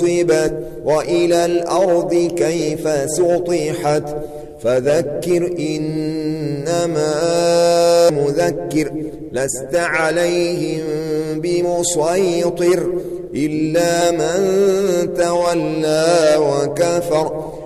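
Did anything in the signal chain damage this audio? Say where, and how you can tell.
Yes. Damaged data in a compressed stream shows up at the codec stage as three brief glitches at about 0.47 s, 8.08 s and 14.00 s. Each is a short chirp or blip of under 20 ms that does not belong to the surrounding audio. Corrupted bytes in the encoded file made the decoder misread those frames and lose sync. It then produced garbage output for a moment until it locked onto the next valid frame header.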